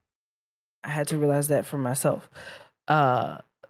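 From 0.89 to 2.33 s, automatic gain rising: the gain control judged the input too quiet and raised level by about 4 dB, swelling speech and background together.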